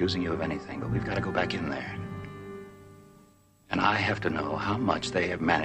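No technical faults are audible.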